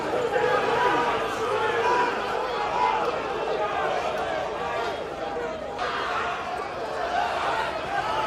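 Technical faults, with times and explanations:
Throughout, block size mismatch (truncated): a steady 46.9 Hz buzz, which fits 1024-sample blocks having their ends discarded at each boundary. Playback speed stays unchanged.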